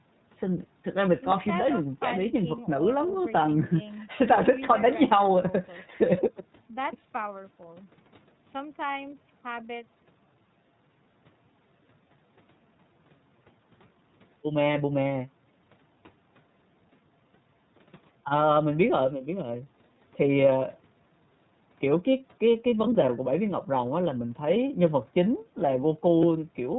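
Throughout the clip the speech has been passed through the iLBC codec, which fits 30 ms frames at about 13.33 kbps. Nothing above 4 kHz survives, and the codec damage is plainly audible as a rough, synthetic edge on the speech. The call microphone processing's removal of the lowest bass is normal.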